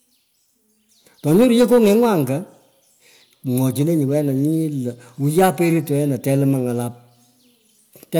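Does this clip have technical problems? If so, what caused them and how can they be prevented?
Yes. Hard clipping from 1.30 to 2.21 s and from 5.38 to 5.50 s: the speech peaks run about 5 dB past what the signal chain can pass, so their tops are sliced flat, adding harsh high harmonics heard as crackly distortion. Leaving more headroom by lowering input gain prevents it.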